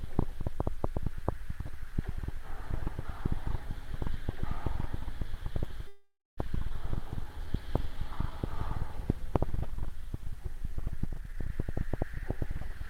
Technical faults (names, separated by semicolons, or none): call audio freeze; skip ahead; jitter buffer slow-down; jitter buffer speed-up